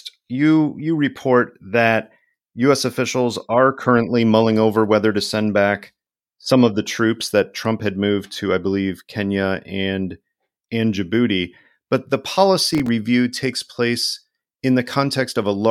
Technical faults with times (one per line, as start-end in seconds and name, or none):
12.71-12.88 processor overload crackle